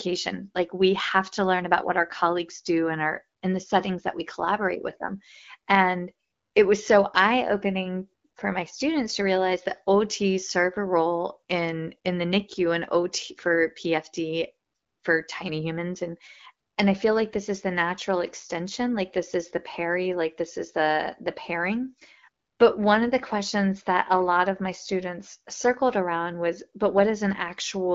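No technical faults can be heard in this recording.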